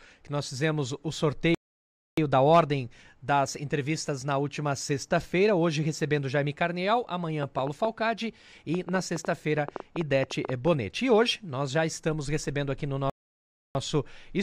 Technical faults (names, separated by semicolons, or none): playback stall; train of clicks